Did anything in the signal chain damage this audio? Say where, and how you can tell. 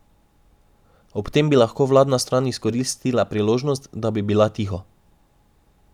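No, nothing in the signal chain damaged this audio.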